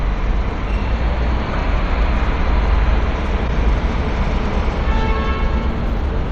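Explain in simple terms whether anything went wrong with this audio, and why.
Broken MP3 bit reservoir, at 1.53 and 3.47 s: the sound briefly glitches and skips ahead, likely because a missing chunk left the next one reading the wrong bytes.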